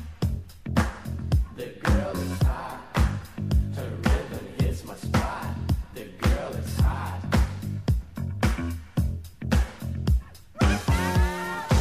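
No technical faults can be heard anywhere in this audio.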